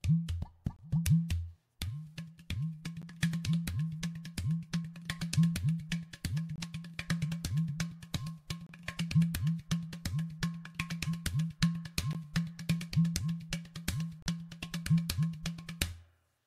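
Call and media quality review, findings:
Gap at a join of encoded pieces, two instances: about 11 ms gap at 3.02 s, about 36 ms at 14.22 to 14.26 s. Smeared edges; sound resumes where it stopped. Probable component: segment concatenation. Encoder start delay and last-frame padding left untrimmed.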